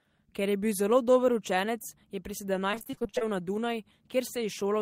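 Repeated packet loss (robotic sound) runs from 2.71 to 3.23 s of this speech clip. Across that half second the stream keeps dropping or delaying packets, 13 gaps in all, the longest about 26 ms. Each hole is bridged by extending the sound just before it, so roughly half the span, about 250 ms, is concealment rather than real signal. The fast succession of patched holes gives a choppy texture with fragments missing.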